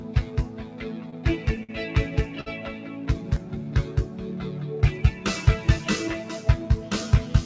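A noise suppressor built for speech has been left running on music or sounds for the whole clip, and you can hear it treating anything steady as noise: held tones, ambience and decay tails get pulled down while attacks punch through, with the level swinging by around 10 dB. That gives the audio a pumping, slightly fluttery, thinned-out feel, because the sustained parts keep sinking between onsets. On top of that there are three short stalls from late packets, at 1.10–1.14 s, 1.63–1.71 s and 2.41–2.48 s. Each time the jitter buffer ran dry, the receiver held the last bit of sound for 25, 54 and 56 ms respectively until the packet showed up, then carried on from the same spot. Nothing actually goes missing, but you hear a sound hang on a touch too long with a faint buzz or dip. Between 3.19 and 3.66 s there's a jitter buffer slow-down. The receiver was rebuilding its reserve by repeating tiny pitch-period slices over and over, stretching that stretch by 49 ms so it plays at about 91% speed without any pitch change, and things sound a bit drawn out. 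Then from 5.79 to 6.37 s it goes the other way, with a jitter buffer speed-up. Too much audio had piled up, so the receiver trimmed out short pitch-period chunks, roughly 50 ms in total, running at about 108% speed at the same pitch, which makes that bit feel hurried and knocks the tempo off. The call path itself is doing its normal thing, with nothing above 8 kHz, which fits G.722 at 64 kbps.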